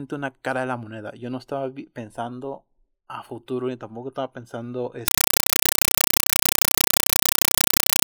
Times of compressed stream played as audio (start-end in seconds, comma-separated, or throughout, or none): 5.08-8.07